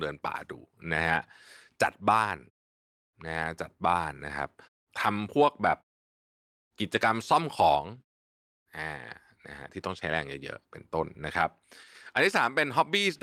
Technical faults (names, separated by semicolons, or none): none